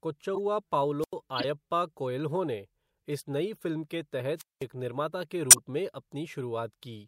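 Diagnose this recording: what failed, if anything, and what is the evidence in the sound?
Two things failed: the codec stage and the wireless link. Corrupt frames were decoded in four places: 0.35 to 0.38 s, 1.35 to 1.44 s just before "कोएल्हो ने इस नई", a single blip at 4.21 s between "इस नई फ़िल्म के" and "एक निर्माता के", and 5.50 to 5.59 s right after "एक निर्माता के". Each is a short chirp or noise burst spanning two or three frames. The last is loudest, near -5 dBFS. The others sit around -20 to -30 dBFS. Damaged bits were decoded as wrong spectral data.

A wireless microphone squelch dropout happens twice. At 1.01 to 1.14 s, hiss rises, then the output is muted for about 89 ms. At 4.37 to 4.64 s, the same pattern repeats with a longer mute of about 202 ms. Speech then returns. This is the analogue FM radio stage. The carrier faded below the receiver's squelch threshold. The receiver then gated its output to near silence until the signal recovered.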